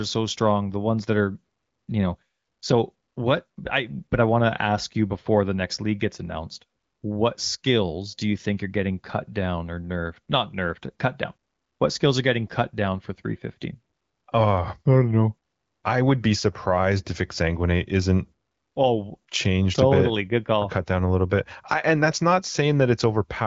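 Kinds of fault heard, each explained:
Nothing in this speech clip counts as a fault; it's simply wideband phone audio, coded with AMR-WB at 15.85 kbit/s, so it stops at about 7.4 kHz and carries the light, expected coding character of HD Voice.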